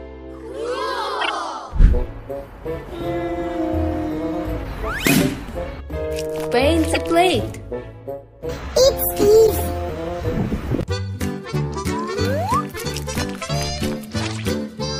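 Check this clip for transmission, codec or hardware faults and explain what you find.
Three short bursts of corrupt frame decoded occur, at 1.21 to 1.30 s, 6.93 to 6.97 s and 9.46 to 9.61 s. Each bursts in as misplaced energy, loud in the first two and somewhat weaker in the third, and lasts only as long as a few consecutive frames, which points to two to five damaged frames per event. Flipped bits left gains and spectral codes misread, and the decoder rendered those frames regardless.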